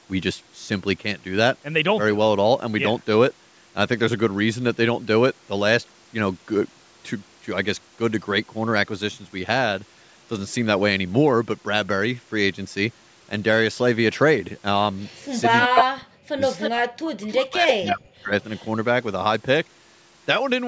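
From 14.99 to 15.26 s there's a faint delayed copy of the speech, about 30 dB under it, trailing by roughly 0.31 s. That's echo leak: the far end is likely on a loudspeaker whose echo canceller let some of its mic pickup through and sent it back. It returns at 15.6 to 15.84 s, and this time it's actually louder than the speech, by about 5 dB.

Overlapping that, from 15.67 to 18.32 s, the speech keeps ducking away, about two seconds in total. At its deepest it drops by about 40 dB, so bits of it all but vanish. That's speech suppressed in double talk. With both sides active, the canceller likely couldn't tell the local talker from its own loudspeaker echo and turned both down.

The same 0.31 s echo keeps leaking through that stretch and just after: 16.58 to 16.7 s at about 5 dB below the speech, a short scrap at 17.31 to 17.35 s around 15 dB down, 17.68 to 17.9 s at roughly the speech's own level, and a faint tail at 18.42 to 18.68 s about 30 dB down.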